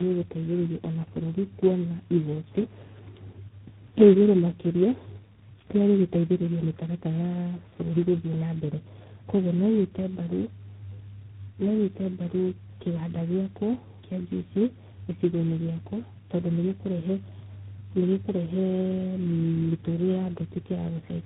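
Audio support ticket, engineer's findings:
Rough, muffled, warbly speech throughout; nothing above 3.9 kHz. Tandem speech coding: sounds like about four speech codecs in a row, likely ending in G.726 24 kbit/s, each re-encoding the previous stage's already damaged output, so artefacts compound.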